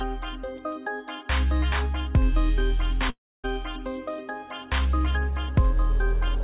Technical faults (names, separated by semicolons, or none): long network dropout